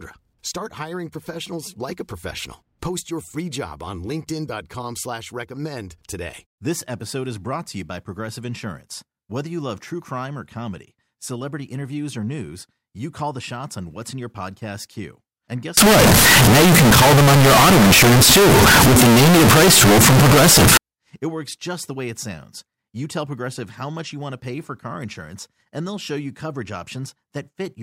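Float read as integer hits this speech clip from 15.77 to 20.77 s. The waveform turns nearly square at an almost fixed high level, loud and harsh, with background noise as loud as speech, though pitch stays traceable. The likely cause is 32-bit float samples read as 32-bit integers, so sign and exponent bits set the level.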